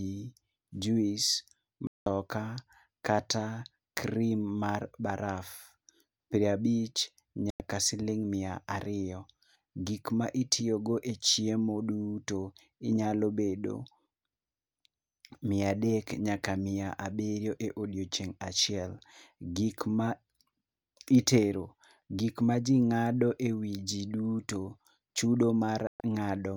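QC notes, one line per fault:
1.87–2.07 s, digital broadcast dropout: the speech mutes for about 0.2 s and resumes mid-flow, with that stretch gone rather than delayed. The receiver discarded corrupt frames and held silence. The length fits six lost 32 ms frames.
7.50–7.61 s, digital broadcast dropout: a shorter hole of about 0.1 s, consistent with three frames failing their check.
25.87–26.01 s, digital broadcast dropout: right after "duto chudo" the sound drops out for about 0.13 s before the receiver regains valid frames.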